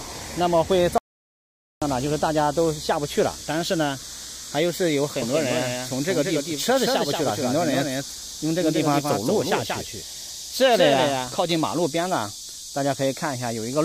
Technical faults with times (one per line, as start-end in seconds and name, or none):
0.98-1.82 audio dropout to silence
5.22-11.52 doubled audio track